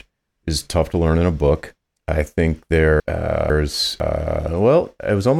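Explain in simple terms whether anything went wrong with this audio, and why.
Chunks out of order, from 3.0 to 4.0 s, just after "a book I think". A half-second piece of the speech arrived one chunk late and plays after the piece that should follow it. Nothing is missing, but the swap sounds jumbled, with three abrupt joins.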